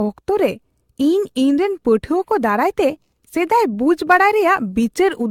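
Across the whole speech clip the sound is swirly and hollow, with smeared consonant attacks and nothing above 17.1 kHz. That is generation loss, likely from the audio passing through a lossy codec around ten times. The character fits repeated AAC-LC encoding at about 96 kbit/s. Each pass quantised the signal again on a shifted frame grid, so noise built up beyond what that bitrate alone would produce.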